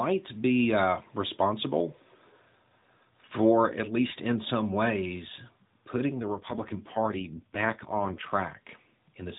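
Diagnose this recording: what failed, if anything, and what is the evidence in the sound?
AMR rate drop at the network and codec stage: from 6.22 to 8.32 s the speech turns buzzier and more synthetic, which fits a fall from 12.2 to 4.75 kbps. The band stays the same and nothing drops out, unlike packet loss.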